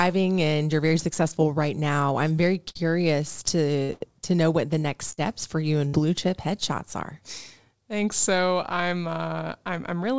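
At 2.36 to 2.39 s there is a short concealed packet loss. About 20 ms of the stream arrived too late to decode, so the receiver extended the preceding sound for roughly 13 ms before blending back. It is heard as a brief smear or wobble. On the waveform it shows as a few copied cycles, and on the spectrogram as a small blurred patch.

Bursts of packet loss follow at 2.69 to 2.77 s, 3.83 to 3.91 s, 3.93 to 4.02 s, 5.12 to 5.19 s and 5.87 to 5.95 s. Each drops about 40 to 80 ms, which is filled by a decaying continuation of the last sound, so you hear a held buzz or fading hiss, then a jump ahead. On the spectrogram these appear as flat, stretched harmonic stripes that fade out. The waveform shows repeating cycles shrinking in amplitude. In the spectrogram, nothing appears above 8 kHz, which fits a wideband call codec.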